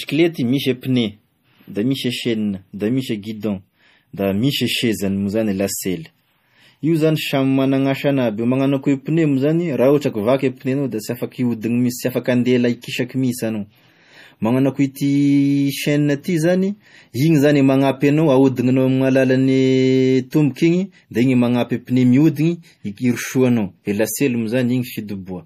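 A watery, swirly texture runs through the whole speech recording, with metallic chirps on s sounds and nothing above about 15.2 kHz. The likely cause is MP3 compression at a low bitrate, around 40 kbps, where the encoder cuts the treble and weak frequency lines flicker between frames.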